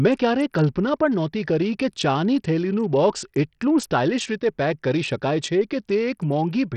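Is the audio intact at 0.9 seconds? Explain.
No. At 0.9 s, as throughout, likely Bluetooth SBC compression at a starved bit pool, suggesting about 64 kbps, cuts everything above 13.5 kHz and leaves gritty noise on the speech.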